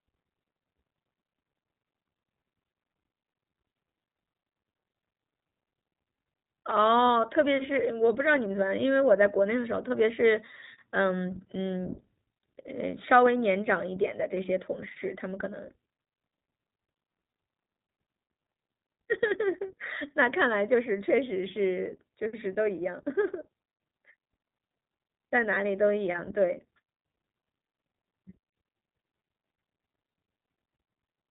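iLBC codec damage runs through the whole speech clip: nothing passes above 3.8 kHz, and each independently coded frame, consistent with 20 ms at about 15.2 kbps, leaves plainly audible rough, synthetic texture.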